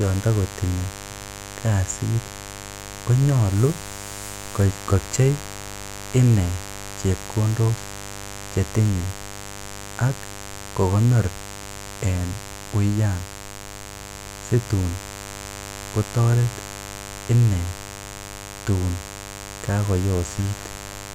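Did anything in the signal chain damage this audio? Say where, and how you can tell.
Yes. The damage happened in the analogue wiring, before conversion. A mains buzz runs under the speech for the whole clip. It is a steady, raspy buzz, not a smooth hum. Its fundamental is 50 Hz, with harmonics climbing into the kilohertz range. It sits fairly high, around 15 dB below the speech. The edge comes from sharp switching spikes, two per mains cycle. An unshielded cable, or a nearby dimmer or rectifier, lets them in.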